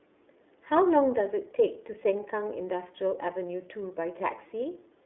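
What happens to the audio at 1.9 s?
At 1.9 s the speech carries the iLBC codec coloration present across the whole clip: content is confined to roughly 300 Hz–3.6 kHz with nothing above 3.9 kHz, and independently coded excitation frames, consistent with 30 ms framing at about 13.33 kbps, give a plainly audible rough, synthetic edge.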